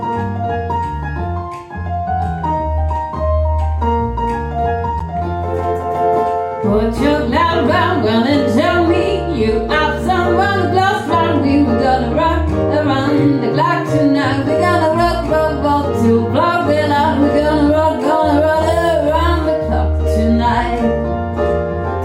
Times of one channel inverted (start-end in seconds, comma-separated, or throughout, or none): none